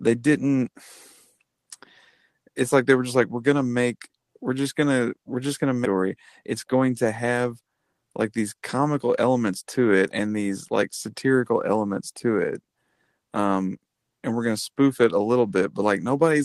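At 5.85 s, right after "gonna we're just gonna", there's a skip ahead. About a second of speech got thrown away while later audio was already queued, so playback jumps straight forward with no filler, and the two sides butt together almost directly.

Then from 6.43 to 7.69 s, just before "like these comical elements", you get a jitter buffer speed-up. The buffer was holding more than it wanted, so it trimmed tiny pitch-period slices over and over. Roughly a tenth of a second disappears, and the speech runs about 9% fast at unchanged pitch, sounding rushed.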